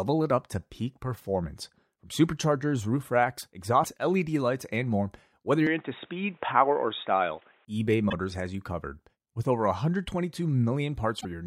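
Corrupted bytes in the compressed stream make the decoder lose sync, so from 3.80 to 3.85 s, just after "superchargers roof racks", the speech briefly breaks up. From 5.67 to 7.65 s, after "lights and more whether", the input was likely switched to a poorer device. Nothing above 3.8 kHz comes through, so the voice turns dull and boxy with no gap and no clear level change, over a faint new noise floor well below it. Two more decoder glitches from damaged compressed data follow, at 8.09 to 8.13 s, just before "has you covered", and at 11.17 to 11.25 s.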